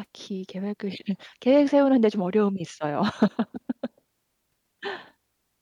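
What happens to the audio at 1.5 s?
Nothing goes wrong at 1.5 s; the speech runs on intact there with no dropout, click or distortion.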